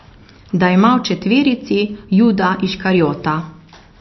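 From start to finish the speech has a dull, boxed-in top end, with nothing at all above about 5.9 kHz, and a plainly audible watery swirl hanging on it. That's most likely MP3 compression, and at a bitrate that fits roughly 32 kbps. With so few bits, the encoder chops off the treble at a fixed point and keeps dropping quieter frequency detail in and out from frame to frame, which is where that swirly texture comes from.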